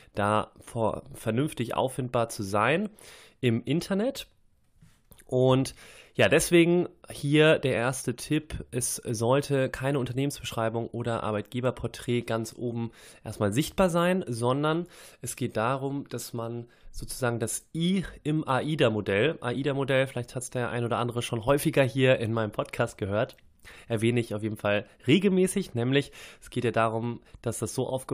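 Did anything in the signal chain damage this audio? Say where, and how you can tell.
No, nothing in the chain damaged it.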